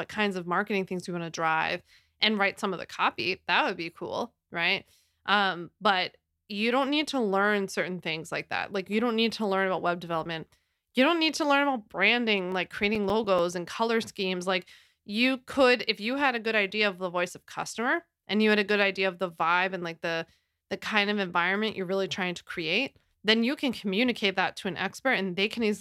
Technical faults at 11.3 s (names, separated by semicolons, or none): none